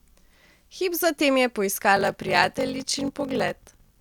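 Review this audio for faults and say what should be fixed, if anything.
Block size mismatch (padded) from 1.95 s to the end: each short written block is zero-filled to a longer read, which fits 1024 samples, causing a 46.9 Hz buzz and speech slowed to 0.861 speed. To prevent it, match the write block size to the reading stage's size or buffer between them.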